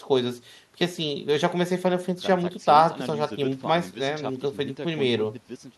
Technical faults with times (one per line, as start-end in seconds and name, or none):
none